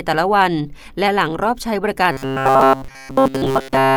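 From 2.12 s to the end of the clip, the speech turns into robotic sound from repeated short buffers. The voice becomes a rigid, metallic buzz at 134 Hz. That rate fits a buffer of about 7.5 ms being replayed over and over. New audio likely arrives too seldom, so the last chunk fills the gap. In this stretch, essentially everything heard is repeats, and the real audio between them is skipped.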